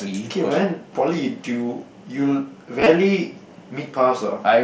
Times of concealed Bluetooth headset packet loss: 2.80-2.86

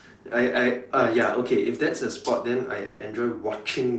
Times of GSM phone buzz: none

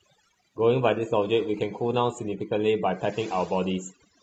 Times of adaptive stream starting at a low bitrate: 0.00-2.73

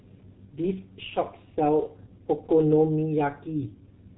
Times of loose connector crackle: none

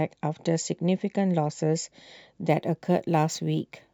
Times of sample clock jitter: 2.49-3.93

